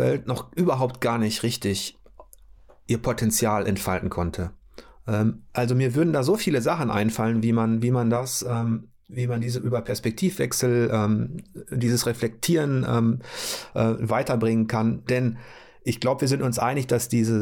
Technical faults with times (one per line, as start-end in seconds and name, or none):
8.16-9.98 channel delay (comb filtering)